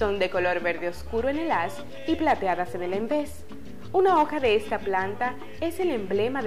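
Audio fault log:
2.27–2.53 s and 3.98–4.55 s: hard clipping. Peaks exceed the stage's limit by about 4 dB, then about 3 dB, and are cut flat. The flattened tops add harsh high harmonics, heard as crackle.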